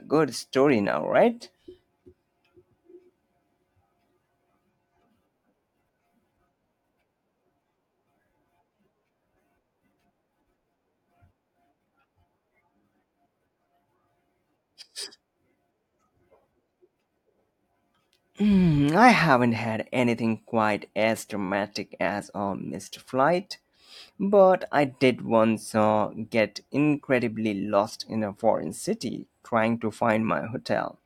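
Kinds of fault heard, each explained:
No technical faults can be heard anywhere in the speech recording; the signal stays continuous and undamaged throughout.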